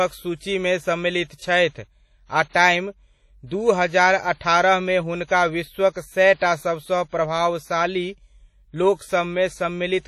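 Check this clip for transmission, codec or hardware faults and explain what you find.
Two codec faults are present: heavy lossy coding across the whole recording, and one pre-echo on an attack.

WMA compression, throughout: the speech was likely squeezed through an early WMA encoder at a low rate, which fits about 32 kbps. Coarse quantisation zeroes weaker components and removes everything above 14.7 kHz, leaving a dull, ringing, washy sound with hiss that breathes with the level.

Pre-echo, from 2.49 to 2.55 s: a sharp attack fell late in a long transform block, so quantisation noise sized for the loud onset spread about 59 ms backwards into the quiet moment before it. A brief hiss leads the attack, and the onset sounds softened and smeared.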